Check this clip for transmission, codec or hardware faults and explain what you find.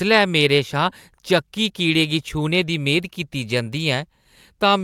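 Listening through the speech, nothing points to a fault anywhere along its path. No event stands out that would mark a problem in how the audio was carried or captured.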